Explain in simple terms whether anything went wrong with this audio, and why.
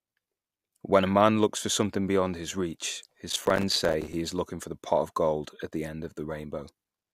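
From 3.30 to 4.13 s, after "something beyond his reach", the speech breaks into gritty crackle. This is processor overload crackle: the computer repeatedly missed deadlines, leaving tiny silent gaps.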